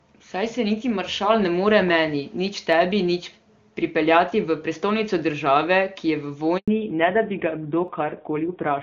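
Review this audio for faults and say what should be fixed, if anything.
There's a dropped samples click at 2.73 s and another at 7.88 s. Each is a single sharp tick where the waveform jumps ahead, which fits a handful of samples, well under a millisecond, going missing. Keeping the audio buffers comfortably fed should stop them.

At 6.58 s the sound cuts out for about 100 ms, until 6.68 s. That's a handover gap: the call hopped networks and no frames came through during the switch, so that slice is simply gone. Tuning handover so it happens make-before-break would avoid the hole.

Right after that gap, from 6.68 s to the end, we get a fallback to narrowband. Before it, the HD Voice (AMR-WB) link sounds clean. After it, nothing above 4 kHz survives, and it turns duller and a bit rough, which fits a drop to a low-rate AMR-NB mode. Making sure both networks support wideband end to end would keep HD Voice alive across the switch.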